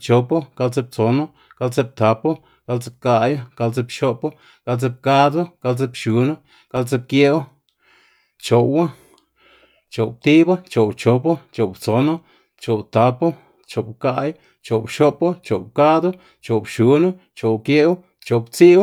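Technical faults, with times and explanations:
6.77 s, block of digital silence: the speech drops to silence for 0.67 ms, consistent with a dropped block of about 32 samples. The hard edges give a sharp tick rather than an audible gap.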